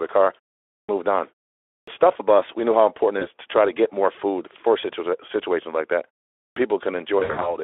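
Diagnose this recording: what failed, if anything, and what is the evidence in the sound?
Clipped start after a pause, at the playback stage: after silences of about 0.4 to 0.47 s, the output device wakes late. Onsets at 0.73 s (after "the car"), 1.72 s and 6.42 s (after "situations like that") lose 140 to 160 ms each. On the waveform the envelope jumps from flat silence straight to full level with no attack; on the spectrogram, harmonics begin as hard vertical edges.

VoIP packet loss concealed by the speech codec, at the network stage: the Speex decoder fills missing 20 ms frames by extrapolating the last pitch and filter with falling gain. One frame drops at 3.19 s, between "we knew how important" and "to try to get". The effect persists until about 3.27 s as later frames rebuild. From 7.19 to 7.56 s, eight frames (160 ms) are lost across 240 ms, with a longest run of 60 ms. On the spectrogram this shows as smeared, repeated harmonic bands fading out; on the waveform, as near-identical repeated cycles that shrink in amplitude.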